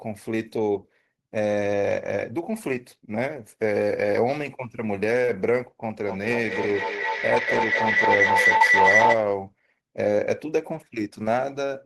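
At 5.22 s there's a tiny short concealed packet loss: about 10 ms of the speech never arrived in time, and the receiver papered over it by stretching the last bit of sound, leaving just a brief smear. From 6.05 to 9.25 s a feedback howl builds up. Two devices are sharing a room and a call, so the mic-to-speaker loop keeps gaining. It settles into a whine around 2 kHz, pulsing roughly every fifth of a second, and peaks about 5 dB above the speech. Inside that, from 8.57 to 8.61 s, a second concealment patches roughly 30 ms of missing audio with a brief smear.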